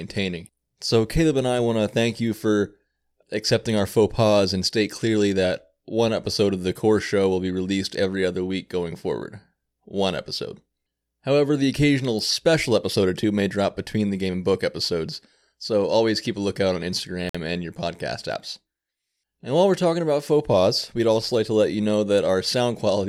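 At 17.29 to 17.35 s, after "keep a lookout on", the speech drops to silence for 52 ms. It resumes with "and your". This is likely a Bluetooth stall. Interference delayed packets, the headphone buffer ran empty, and playback paused until resent data arrived.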